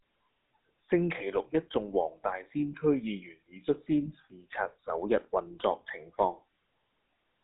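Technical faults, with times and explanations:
Throughout, GSM full-rate codec: the whole clip has that buzzy, gravelly grain you get when the vocal tract is modelled and fed a sparse pulse train, which fits 13 kbps full-rate GSM. The line band is roughly 200 Hz to 3.7 kHz, with nothing above 3.8 kHz.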